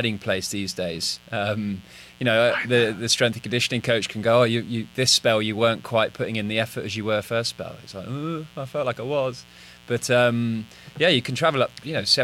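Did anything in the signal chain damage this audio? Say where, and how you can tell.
Yes. A mains buzz sits under the speech for the whole clip, and it points to the analogue wiring stage. It is a steady, raspy buzz roughly 30 dB below the speech, built on 60 Hz. On a spectrogram it shows as evenly spaced horizontal lines at multiples of 60 Hz, climbing to several kHz. In the waveform, sharp spikes recur twice per mains cycle, at 120 Hz, where a dimmer, rectifier or unshielded cable let switching pulses into the signal path.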